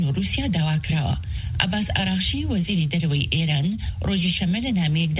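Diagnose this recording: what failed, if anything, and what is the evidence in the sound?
Nothing failed: the audio came through a call path and has nothing above 4 kHz, which points to a narrowband telephone codec such as G.711 mu-law at 64 kbps, and that band limit is what such a path normally does.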